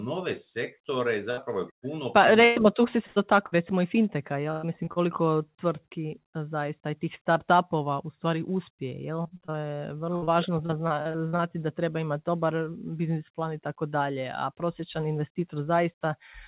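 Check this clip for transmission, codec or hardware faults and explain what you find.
Two stretches of repeated packet loss (robotic sound) are audible, from 1.31 to 4.99 s and from 9.22 to 11.42 s, just before "da treba imati dobar". Packets kept arriving late or not at all, and each hole was bridged by extending the last bit of sound. The first stretch has eight gaps of up to 120 ms. The second has fourteen shorter ones of up to 58 ms. The speech turns choppy, with fragments missing. The speech is band-limited to 4 kHz, which points to a narrowband telephone codec such as G.711 mu-law.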